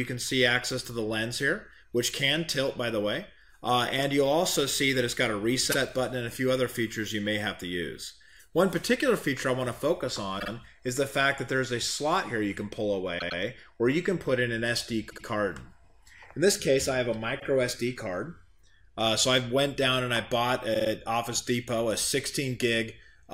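Short stutters at 5.71, 10.39, 13.18, 15.09, 17.39 and 20.73 s are repeated frames: blocks of 52 to 105 ms of compressed audio play again, adding about 0.73 s in total.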